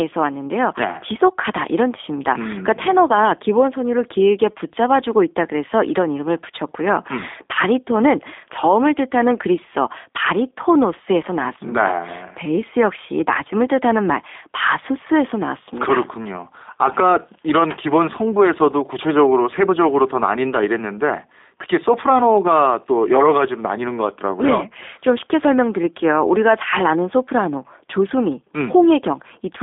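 From start to finish the speech carries G.729 codec damage. It is rebuilt from a vocal tract filter, pitch predictor and sparse pulses, which fits an 8 kbit/s coder. The line band runs from 250 Hz to 3.6 kHz, nothing remains above 3.7 kHz, and the voice sounds plainly rough and synthetic.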